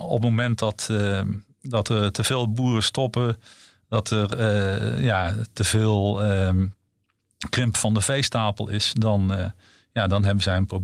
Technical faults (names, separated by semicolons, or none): none